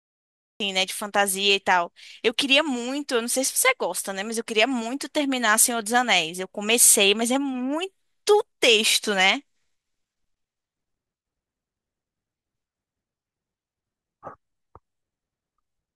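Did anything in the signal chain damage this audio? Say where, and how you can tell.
Yes. Capture began late, so the file holds digital silence until 0.60 s, then the speech cuts in mid-sound with no natural attack: a cut-off start.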